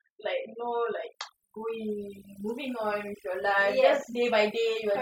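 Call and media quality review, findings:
Overdone noise removal, entire clip. Background gated to near silence with twinkling specks. Probable component: noise suppressor set too aggressive. Bins near the noise estimate are pulled far down or zeroed, taking quiet speech detail too. Spectrogram: black gaps between isolated flickering dots, ragged speech harmonics. Waveform: flat floor between phrases.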